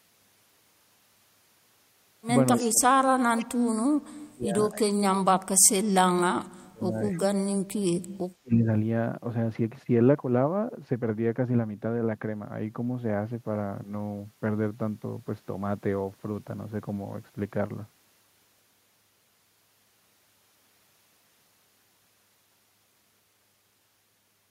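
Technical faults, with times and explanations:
2.58–2.69 s and 3.37–3.45 s, echo leak: faint delayed copies of the speech return 278 ms late, about 15 to 20 dB down, likely loudspeaker echo an echo canceller missed.
2.6–6.95 s, 7.11–8.01 s and 8.4–8.67 s, speech suppressed in double talk: the speech drops away sharply, by up to about 40 dB, likely an echo canceller clamping down while both sides talked.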